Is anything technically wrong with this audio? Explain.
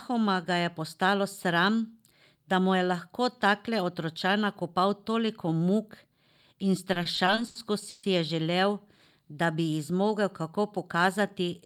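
Yes. From 6.93 to 8.05 s the speech shows repeated stalls (stutter): packets arrived late, the jitter buffer kept running dry, and the receiver stretched the last sound through seven waits, about 320 ms in all, the longest 140 ms. Unlike packet-loss dropouts, nothing goes missing; the speech drags and stutters.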